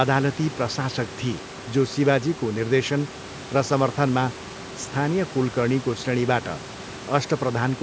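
Nothing's actually wrong with this speech clip: the top stops at 8 kHz from the call's microphone processing, and the room noise sits about 18 dB under the speech, both just part of how it was captured.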